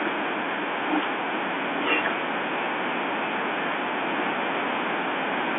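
No technical faults can be heard in this speech, which comes through a G.711 telephone line whose narrow band of roughly 250 Hz to 3.5 kHz is simply the normal sound of that format.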